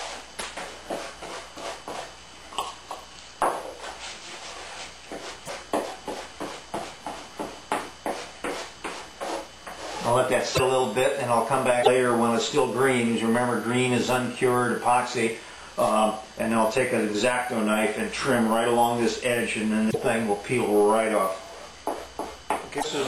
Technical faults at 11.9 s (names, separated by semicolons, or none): broken MP3 bit reservoir